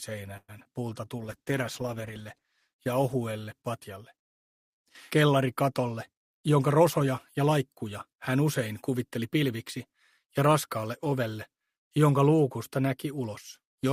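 At 0.37 to 0.50 s the sound stalls into a fading buzz, then 50 ms of flat silence, shown as a decaying smear and flat waveform. This is likely a call audio freeze, with 110 ms inserted and nothing lost.

Short concealed packet loss follows at 0.60 to 0.63 s and 0.65 to 0.67 s, losing 40 ms and 20 ms. Each shows as a brief blurred smudge on the spectrogram, heard as a small smear.

From 0.70 to 1.17 s a jitter buffer slow-down plays the audio at 91% speed, adding 51 ms. Repeated pitch periods appear as stretched, evenly ruled harmonics, drawn out at unchanged pitch.

A call bitrate drop runs from 1.19 to 4.24 s, from 48 to 13 kbps, bottoming for 1.49 s. The spectrogram loses its upper band and grows blotchy, so the sound turns muffled and watery.

From 5.92 to 7.74 s a jitter buffer speed-up runs at 106%, trimming about a tenth of a second of pitch periods. The waveform looks compressed in time, and the sound is slightly hurried at the same pitch.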